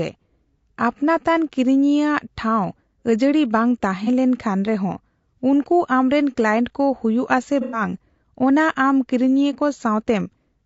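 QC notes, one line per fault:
Throughout, low-delay AAC compression: The speech sounds rough and grainy, with noise filling the gaps between harmonics and a thin, synthetic-sounding top band. The likely cause is AAC-ELD's short frames resolving pitch poorly at a low bitrate, which fits about 32 kbps.
4.04–4.09 s and 7.61–7.81 s, AAC frame loss with concealment: Short smeared, noisy patches where the decoder rebuilt missing audio from the last good spectrum. The first gap is about 30 ms. The second lasts about 120 ms, fitting four lost frames, so it smears longer.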